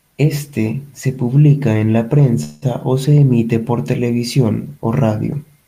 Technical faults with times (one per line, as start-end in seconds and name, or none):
2.43-2.64 call audio freeze